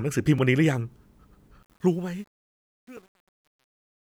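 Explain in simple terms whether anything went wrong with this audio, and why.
A block of digital silence at 0.38 s lasts about 3 ms, which fits a 128-sample buffer, and a second one at 2.97 s lasts about 5 ms. In each, the program likely failed to hand over the next chunk of sound in time, so the output dropped straight to zero and came straight back. Those abrupt edges make a small tick rather than a gap you'd notice as missing sound.

Truncation distortion on a fade runs from 1.63 s to the end. The volume change is being worked out with only about 10 bits of precision and no added noise to smooth the rounding. As the speech gets quieter, the waveform collapses into a few coarse steps, and from about 2.18 s the tail turns gritty.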